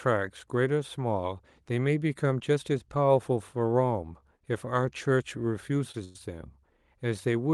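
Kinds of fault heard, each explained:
Short stall from a late packet: the last sound gets held a touch too long while a late packet catches up, at 4.38 s and 5.91 s.
Call audio freeze: at 6.04 s the sound hangs as a fading buzz for about 110 ms, likely from packets held up in transit, then resumes.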